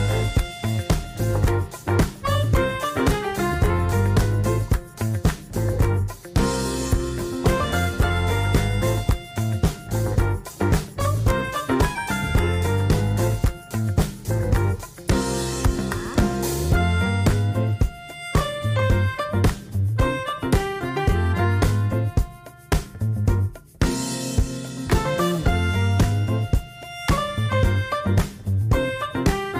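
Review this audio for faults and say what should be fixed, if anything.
Nothing to fix; no faults detected.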